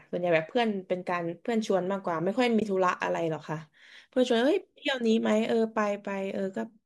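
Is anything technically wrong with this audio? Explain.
Yes, there's a short dropout in the speech. Around 2.60 to 2.62 s there's AAC frame loss with muting: roughly 20 ms of audio, about two short frames' worth, gets zeroed. The overlapping windows fade it out and back in, so you hear a soft little hole. The codec is likely low-delay AAC, which would explain the short frames.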